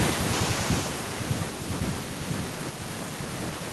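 A speech recording with automatic gain falling at the start: from 0.05 s to 1.63 s the level sinks steadily by about 9 dB. The gain control has judged the opening input too loud, or its background noise too strong, and is pulling its gain down over roughly a second and a half rather than all at once. Because the correction acts on the whole signal, the background noise sinks along with the speech, giving an audible downward ramp in overall level.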